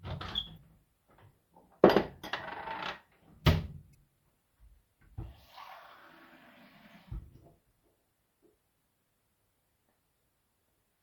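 A short glitch cuts into the sound from 0.54 to 0.58 s, and a second one appears from 3.91 to 3.95 s. Both come from damaged data in a compressed stream. At each point a small run of the encoded bytes was corrupted, so the decoder misread those frames. It then lost its place and had to find the next valid frame header before playback could resume cleanly.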